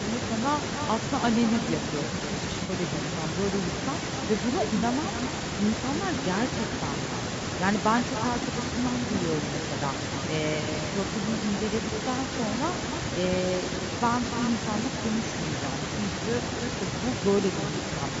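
Right from the start you can hear echo with no canceller. Every phrase comes back about a third of a second later, roughly 9 dB down, as a thinner copy. That's the far end playing the call over a loudspeaker, its mic picking it up again, and nothing stripping it out before it returns across the network. The result is a constant shadow trailing the speech.

On top of that, the whole thing sounds rough and grainy. There's noise filling in between the harmonics, and the top end has a synthetic sheen. That's most likely low-delay AAC compression, AAC-ELD, running at a low bitrate of around 32 kbps. It codes about 500 frequency lines a frame with a low-delay window, and at this bitrate the damage is plainly audible here.

Then there are three spots of AAC frame loss with concealment. The first runs from 2.63 to 2.71 s, and its length fits two lost frames, about 60 ms. The second is a single frame of about 30 ms at 4.79 to 4.84 s. 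The third is another of about 30 ms at 6.68 to 6.72 s. Each time, the decoder covers the gap by reusing the last good spectrum, so you get a brief smeared, noisy or phasey patch rather than a dropout to silence.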